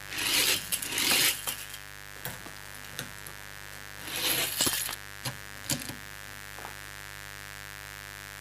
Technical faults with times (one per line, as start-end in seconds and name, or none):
0.00-8.40 mains buzz